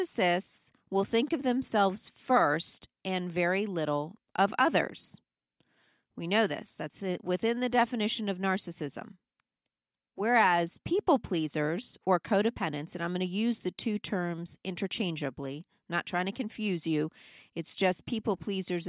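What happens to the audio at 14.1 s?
Nothing goes wrong at 14.1 s; the speech carries on intact through that moment.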